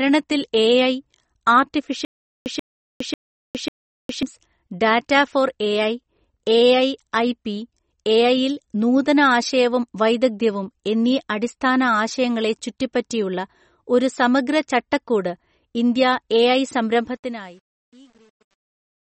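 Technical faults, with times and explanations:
Throughout, MP3 compression: nothing above 8.4 kHz, so the spectrogram shows a flat ceiling; swirly, watery speech, likely from a 32 kbps encode.
2.05–4.23 s, stutter with silent gaps: a 135 ms burst repeats four times every 0.54 s with 410 ms digital silence between, seen as identical blocks separated by flat lines; likely a stalled stream.
16.96–19.13 s, truncation distortion on a fade: after "ചട്ടക്കൂട് ഇന്ത്യാഎഐ" the fade-out is held to 9 bits without dither; from 17.37 s the waveform becomes coarse square steps, sounding gritty.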